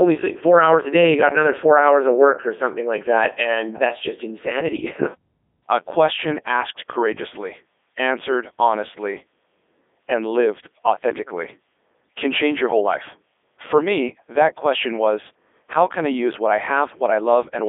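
From start to finish the speech has passed through a Codec 2 vocoder, which fits a 3.2 kbit/s mode. It sends only pitch, voicing, energy and a spectral envelope, then rebuilds the voice from sine waves. The result sounds robotic and buzzy, band-limited to about 300 Hz to 3.6 kHz, with nothing above 3.7 kHz.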